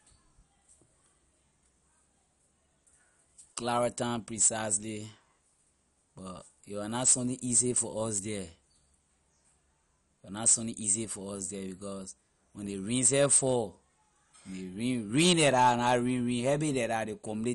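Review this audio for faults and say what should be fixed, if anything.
MP2 compression, present throughout the speech: the audio is dull, with nothing above 11.3 kHz, and carries a plainly audible gurgling, granular roughness. This likely comes from MPEG Layer II encoding at a low bitrate, which fits something around 48 kbps. With so few bits to share among its 32 sub-bands, the encoder shuts off the upper bands entirely, lets others flicker in and out, and quantises the surviving bands coarsely, producing the grainy texture. To prevent it, encode with a modern codec or at a substantially higher bitrate.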